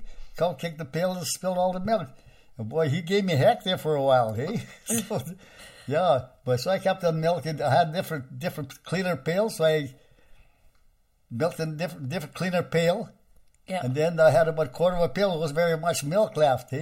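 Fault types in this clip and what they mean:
Channel delay (comb filtering): One channel lags by about 1.5 ms. Mono summing cancels evenly spaced frequencies, starting near 300 Hz. The clip sounds hollow.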